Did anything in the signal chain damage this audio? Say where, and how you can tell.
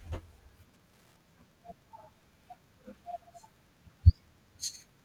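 Yes. Wi-Fi interference enters at the analogue wiring: a faint tick, far below the speech, repeats every 102.4 ms throughout. A nearby radio's beacon bursts are rectified by the circuit. That fixed ten-per-second rhythm separates it from mains hum or random clicks.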